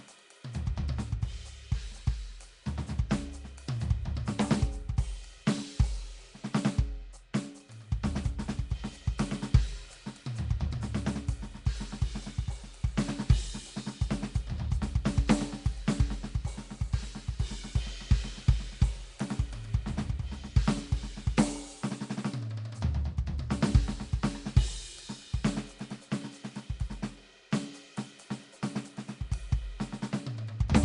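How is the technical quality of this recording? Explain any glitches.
The recording is clearly degraded by lossy coding throughout. From start to end the music carries a rough, hissy halo and a smeared, underwater character, with nothing above 10.6 kHz. This is likely Nellymoser compression: the codec codes short blocks coarsely, starves weak bands of bits and fills them with noise, here at a rate near 44 kbps.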